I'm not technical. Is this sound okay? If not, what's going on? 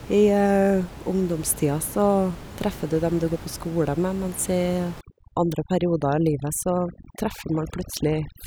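No. Overdone noise removal starts at about 5.0 s and runs to the end. A cleanup tool pushed too hard silences narrow slices of sound it mistakes for noise, so the background drops and breaks up into twinkling specks.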